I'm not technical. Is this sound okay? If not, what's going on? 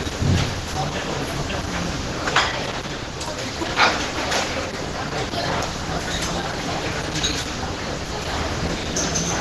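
No. From start to finish, the sound is muffled, rough and hoarse. Nothing comes through above 12 kHz, so it lacks sparkle. This is likely heavy Opus compression. The file was squeezed so hard that fine detail was replaced with a grainy approximation.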